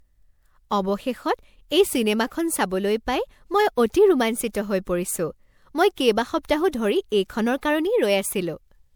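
Throughout, the speech sounds swirly, hollow and smeared, with blurred attacks, pointing to likely generation loss from roughly five MP3 passes around 128 kbit/s.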